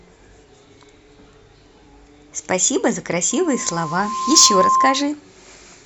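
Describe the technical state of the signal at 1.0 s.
At 1.0 s the speech signal is intact, with no audible technical fault at that moment.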